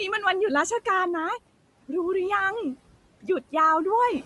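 Noise suppressor artifacts run through the whole speech clip: the suppressor pulls steady room noise down about 18 dB, so the noise sinks between words and rises under them. A grainy, breathy edge and nothing above 11.6 kHz point throughout to likely Bluetooth LC3 compression, which discards and noise-fills the upper spectrum. From 3.22 to 3.53 s, speech cut by the noise suppressor makes roughly a tenth of a second sound swallowed, dipping about 13 dB as speech is mistaken for noise.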